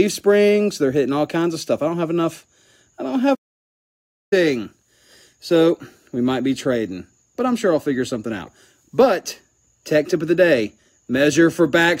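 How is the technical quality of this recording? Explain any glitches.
One glitch stands out: a playback stall. At 3.34 s the sound cuts off mid-flow and stays silent for about 0.97 s, resuming at 4.33 s. The likely cause is the player running out of buffered data or its thread being blocked, which mutes the output until it recovers.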